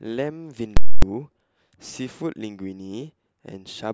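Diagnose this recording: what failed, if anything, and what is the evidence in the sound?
A processing stage produced invalid numbers pinned at full scale from 0.77 to 1.02 s, fitting a 4096-sample block, heard as loud pops bracketing silence in the speech.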